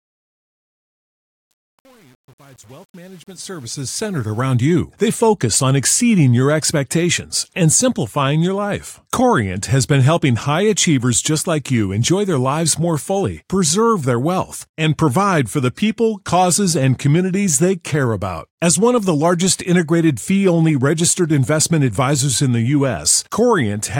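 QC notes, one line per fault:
0.00–4.55 s truncation distortion on the fade-in: gritty until 4.1 s, as the quiet level stair-steps without dither, which fits 8-bit resolution.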